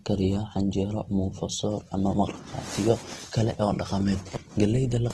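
From start to finish the speech carries likely Opus compression at a low bitrate, fitting about 16 kbps. Nothing remains above 12.2 kHz, and noise-filled bands make voiced tones grainy and rough. A spectrogram shows a hard ceiling and speckled, smeared harmonics.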